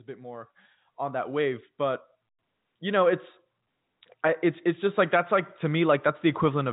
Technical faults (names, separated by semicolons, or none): automatic gain rising